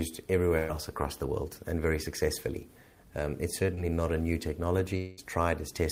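Right near the start, from 0.57 to 0.71 s, there's a burst of packet loss. A run of packets went missing or turned up too late, and the receiver covered about 110 ms by stretching the last sound and letting it sag in level. You hear a held, buzzy or hissy tail rather than a true gap. When things pick up again, roughly 100 ms of the real audio has been skipped.

At 3.75 to 3.79 s there's a short concealed packet loss, much smaller. Only about 20 ms of audio failed to reach the decoder in time, and the fill runs just over 20 ms before blending back into the real signal. It comes across as a quick smear or wobble, and whatever brief detail sat in that slot is gone.

Then from 4.97 to 5.19 s the sound stalls for about 200 ms. The last bit of audio is carried on as a fading buzz or hiss for just over 200 ms, never quite dropping to silence, and then the audio jumps ahead with that stretch missing. 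That's likely a long network dropout, where nothing arrived for a while and the receiver could only extend what it already had until real audio came back.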